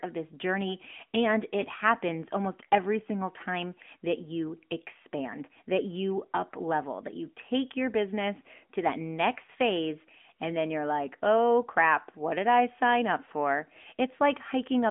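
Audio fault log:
Throughout, AMR narrowband mobile codec: the sound is boxed into a phone band of roughly 200 Hz to 3.4 kHz with nothing above 3.6 kHz, and there's a plainly audible buzzy, synthetic edge from the vocal-tract model, which fits a mid-rate mode around 10 kbps.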